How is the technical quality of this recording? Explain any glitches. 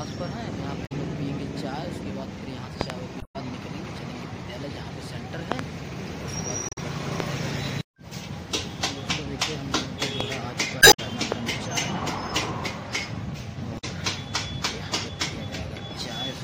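The recording has two recurring faults: bursts of damaged data in a compressed stream and loud pops.

Damaged data in a compressed stream occurs at 0.85 to 0.92 s, 3.18 to 3.36 s, 6.69 to 6.78 s, 10.79 to 11.00 s and 13.77 to 13.84 s. At each point, part of the encoded stream was corrupted, so the decoder misread or rejected those frames and had to search for the next valid frame header before decoding resumed. Each event is heard as a chirp, squawk, click or brief hole. The event at 10.79 s also stretches the timeline by about 9 ms.

Loud pops occur at 2.81 to 2.92 s and 5.52 to 5.61 s, each a quick pair, and as single pops at 7.20 to 7.22 s, 10.21 to 10.23 s and 11.32 to 11.34 s. Each is a sharp transient standing roughly 20 to 25 dB above the surrounding sound, which continues underneath. They are likely caused by a sudden voltage step or pulse from a plug, switch, static discharge or driver glitch, shaped by the circuitry that follows.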